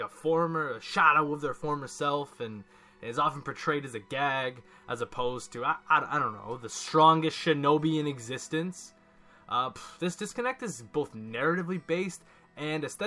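No technical faults can be heard anywhere in the recording. Nothing in it breaks, drops out or distorts at any point.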